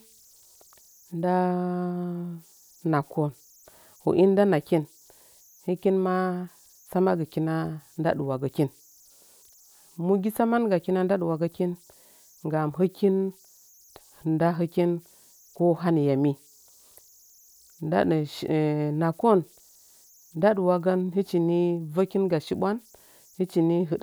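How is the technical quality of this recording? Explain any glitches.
The recording carries a converter fault that runs for its whole length: converter idle tones, a faint high whistle sitting about 35 dB below the speech throughout. The pitch lands somewhere around 7 kHz, and it stands out most in the pauses between phrases, where it turns into a thin chirp. Under quiet passages it becomes a grainy texture. The cause is a delta-sigma converter running without dither. With very little input, its modulator settles into repeating bit patterns, and those cycles produce tones whose pitch follows the input's offset. Unlike steady broadband hiss, this is pitched. Unlike mains hum, it sits high in the spectrum and shifts with the input's offset.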